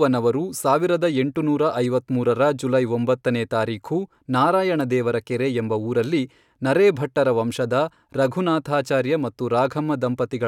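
Nothing stood out on listening to this speech recording.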